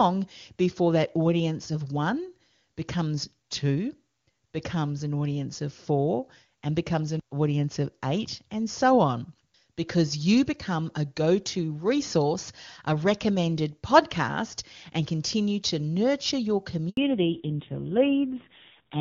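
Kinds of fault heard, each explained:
Handover gap: the call switches networks and no speech frames arrive meanwhile, so the sound drops out for 80 ms from 16.89 to 16.97 s. On a waveform it is a flat stretch after a quick decay; on a spectrogram, a thin vertical blank band across all frequencies.
Fallback to narrowband: right after that gap, at 16.97 s, the call falls from HD Voice at a rate that fits 23.85 kbit/s to a narrowband codec near 5.9 kbit/s. The speech turns dull and raspy, and a spectrogram shows everything above 4 kHz suddenly gone until the end.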